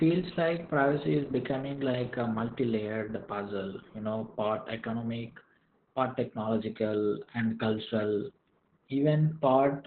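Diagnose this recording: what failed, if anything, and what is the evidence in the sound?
The codec stage failed: Opus voice compression ran SILK-only at a narrowband setting, with a bitrate that sounds like about 8 kbps. Throughout the speech, everything above about 4 kHz is gone, so it sounds muffled, and the coarse excitation coding leaves a hoarse, slightly robotic edge.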